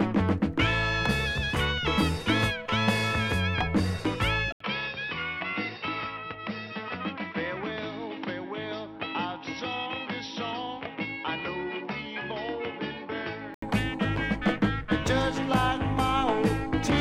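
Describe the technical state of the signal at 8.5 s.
At 8.5 s the input has likely switched to a poorer device (4.52–13.62 s): duller sound, spectrogram empty above 5.7 kHz, waveform about 5 dB lower after an 80 ms gap.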